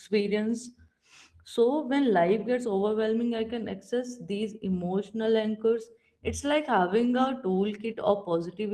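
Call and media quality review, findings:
Call and media quality review findings: no faults found in this speech clip.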